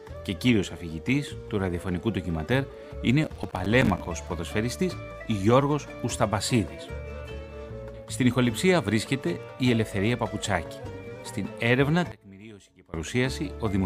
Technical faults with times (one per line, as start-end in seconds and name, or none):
3.24-4.09 processor overload crackle
12.12-12.94 one channel inverted